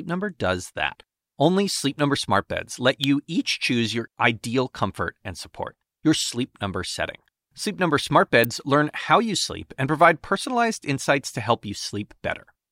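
At 3.04 s, just before "each choose your ideal", a sharp snap lands on top of the speech, and another comes at 8.44 s, right before "learn how you sleep". Both are electrical switching spikes: very short arcs, most likely from a switch or motor nearby, picked up by the audio line. The first peaks around -5 dBFS and the second is quieter, near -10 dBFS, so each sounds like a brief, hard tick.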